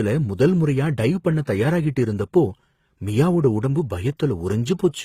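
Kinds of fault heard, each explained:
Transcoding between lossy codecs: throughout the speech, two different kinds of coding damage sit on top of each other rather than one, with nothing above about 15.7 kHz. The coarse, band-replicated texture typical of a very low-rate HE-AAC stage is still audible beneath a second coder's own smearing, which fits a likely chain of HE-AAC near 20 kbit/s followed by Opus near 48 kbit/s. A single low-bitrate encode would show only one artefact signature.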